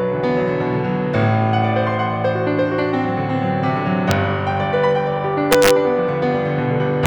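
At 4.11 s the music cracks once, sharply: integer overflow. A loud peak exceeded the largest integer and wrapped to the opposite sign instead of being limited. From 5.52 to 5.71 s, about 2 dB over, cracks recur on loud moments. At 7.06 s a final crack sounds.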